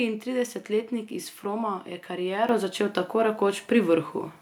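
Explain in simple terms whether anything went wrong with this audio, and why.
At about 2.49 s, just before "začel tako", the speech and the background noise suddenly get louder together in one jump. This is a microphone volume stepped up fault: the call software judged the microphone too quiet and turned its input level up all at once.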